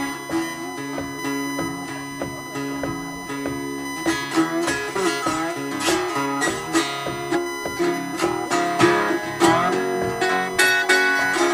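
From start to finish a USB whine sits under the sound: a steady, fixed-pitch tone at 1 kHz with its strongest component at 2 kHz, loud enough to sit not far below the audio itself. It comes from current drawn in 1 ms USB frames leaking through power or ground into the signal path. On a spectrogram it shows as thin, unbroken horizontal lines at 1 kHz and 2 kHz across the whole clip. On the waveform it appears as a constant fine fuzz riding on the trace.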